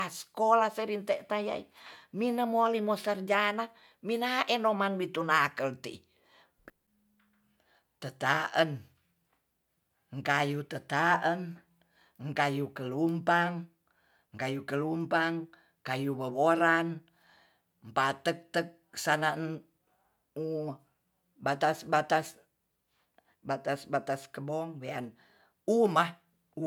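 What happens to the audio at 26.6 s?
At 26.6 s the audio is intact, with no fault at that point.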